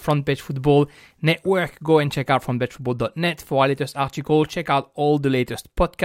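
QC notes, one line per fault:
Nothing to flag here; the speech came through without a single problem worth noting.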